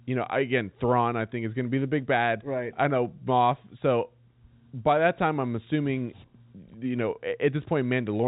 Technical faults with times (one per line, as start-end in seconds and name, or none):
none